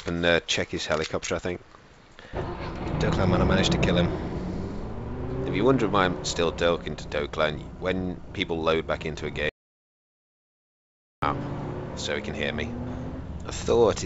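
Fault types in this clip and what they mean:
Audio dropout to silence: from 9.49 s to 11.22 s the sound just vanishes for about 1.73 s. It's plain silence, with no room tone or hiss underneath, so whatever was happening then is simply gone. The likely cause is the input dropping out, say a loose device or a brief mute, while recording carried on writing silence. Around it the band tops out near 8 kHz, which fits a G.722 call codec.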